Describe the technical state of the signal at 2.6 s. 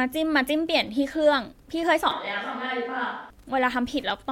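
Wi-Fi interference runs from 0.66 s to 4.32 s, covering 2.6 s. A nearby Wi-Fi radio's beacon, sent every 102.4 ms, is rectified by the audio circuit, producing a steady tick about ten times a second, roughly 40 dB below the speech.

A switch to a distant microphone spans 2.11 s to 3.30 s. The close microphone's signal likely dropped out, leaving a farther microphone in use. The speech turns abruptly roomy and hollow with thinner bass, falls about 5 dB, and room noise rises to about 30 dB below the speech.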